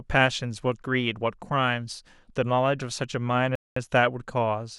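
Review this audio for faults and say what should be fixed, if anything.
A rebuffering stall interrupts the speech from 3.55 to 3.76 s: playback ran dry of downloaded data, fell silent for about 210 ms, then picked up at exactly the point where it halted. What separates it from a dropout or packet loss is that nothing is missing. The speech continues seamlessly after the gap, so the clip simply runs longer rather than skipping material. To prevent it, enlarge the playback buffer or delay starting playback until enough audio has arrived to ride out network slowdowns.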